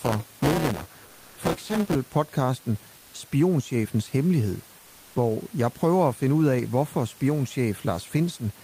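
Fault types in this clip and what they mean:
Buffer tearing: the program filling the playback ring buffer and the hardware reading it have drifted so that they cross inside every period. About a fifth of each chunk holds audio from roughly 10 ms earlier, joined on with hard edges. From the start to 1.95 s this puts a rasping 200 Hz buzz over the speech. The waveform shows small steps every 5 ms, and the spectrogram shows thin vertical lines at that spacing with a 200 Hz harmonic comb.
Comfort noise in place of the background: in pauses the sender likely stopped transmitting under Opus DTX, and the receiver filled each gap with generated noise. At 1.05 to 1.37 s and 4.79 to 5.15 s, the real room noise, about 30 dB below the loudest parts, gives way to a smooth, even hiss. It is about 1 dB off in level in the first gap and level in the second. The spectrogram shows flat, textureless bands with sharp edges, and the waveform goes uniform.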